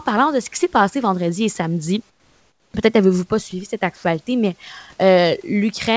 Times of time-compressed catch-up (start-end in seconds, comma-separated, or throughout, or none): none